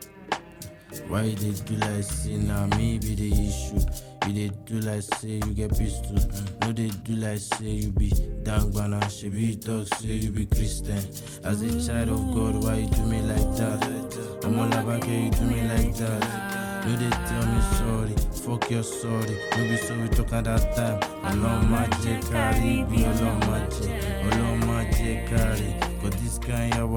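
No technical faults can be heard anywhere in the audio. There is nothing to place on the timeline.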